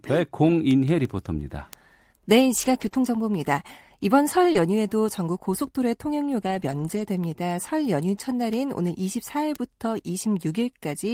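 From 2.57 to 2.87 s the speech turns rougher and noisier without breaking up: a lost packet rebuilt from error correction. About 160 ms of audio, spread over eight separate lost packets, was missing, and the decoder played the low-bitrate copies carried in the following packets instead. The sound stays continuous but loses clarity until normal frames resume.

At 2.89 to 2.93 s comes a short concealed packet loss. A 20 ms stretch never arrived in time, and the receiver extended the preceding sound for about 14 ms before blending back. This is heard as a brief smear in the speech. Immediately after, from 2.93 to 2.95 s, another 20 ms is rebuilt from error correction, keeping the roughened texture going a moment longer.

The same pairing returns at 4.53 to 4.57 s. There 20 ms of concealment fills the hole, and a 20 ms error-correction copy covers the tail from 4.55 s, giving a short wobble followed by a rougher, noisier frame.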